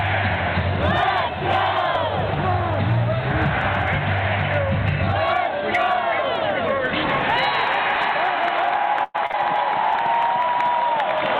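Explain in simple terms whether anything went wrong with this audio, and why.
Yes, a few things went wrong, in two places.

From 0.86 s to 4.14 s there is video or display buzz. A screen or video cable was leaking into the audio. It adds a faint, steady buzz at 60 Hz, the rate a 60 Hz picture refreshes, with a thin hash above it. It is quiet under the sound, but it is there for more than three seconds.

At 9.03 s there is a burst of packet loss lasting until 9.16 s. About 100 ms of audio never arrived in time. The receiver stretched the last bit of sound to fill about 107 ms, fading it as it went. You hear a short held buzz or hiss, and then the sound picks up further along. The part in between is simply gone.

Right after that come two cases of short concealed packet loss, from 9.26 to 9.32 s and from 9.32 to 9.35 s. Here about 40 ms, then about 20 ms, went missing. The receiver patched each hole by continuing the sound just before it, then blended back into the real audio. 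Each one is heard as a brief smear or wobble. Coming straight after the larger gap, they make that moment sound choppy for a little longer.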